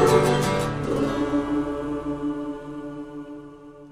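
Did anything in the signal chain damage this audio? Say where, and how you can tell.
Yes. Imaging from linear upsampling, at the sample-rate conversion stage, throughout. A mirrored image from 12 to 24 kHz, about 35 dB down, suggests a 24 kHz source interpolated straight-line to 44.1 kHz.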